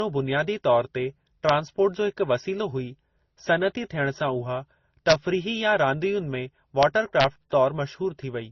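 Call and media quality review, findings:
Transcoding between lossy codecs, whole clip: speech band-limited with nothing above 6.3 kHz, plus two layers of coding artefacts heard together. Likely cause: an MP3 stream at roughly 27 kbit/s re-encoded to Opus at about 32 kbit/s, with the Opus stage coding the MP3 damage as if it were signal. Differs from a single low-bitrate encode, which has one consistent artefact character, not two stacked.

Integer overflow, four events: a crack at 1.49 s between "बुनियादी तौर ते" and "जो हिकु वसीलो हुई", a longer burst at 5.10–5.13 s, a crack at 6.83 s, and another burst at 7.20–7.24 s. Probable component: fixed-point gain or mix stage without saturation. Peaks only about 1 dB over full scale, at most, wrap to the opposite sign instead of being limited. Differs from clipping: violent full-range cracks rather than flattened, buzzy peaks.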